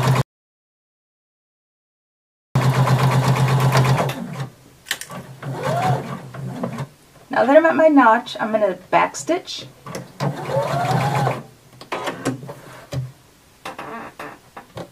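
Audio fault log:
0.21–2.56 s, audio dropout to silence: sound cuts out for about 2.34 s into dead digital silence with no room tone, likely from lost input while recording continued.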